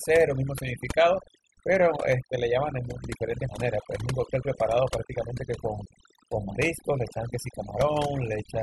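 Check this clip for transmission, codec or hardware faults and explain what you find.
The speech shows one fault, overdone noise removal, present throughout. The suppressor was pushed too hard: bands near its noise estimate are cut to nothing, taking quiet speech detail too. Pauses fall to near silence with twinkling specks. A spectrogram shows a black floor dotted with isolated bright flecks and ragged, hollowed speech harmonics.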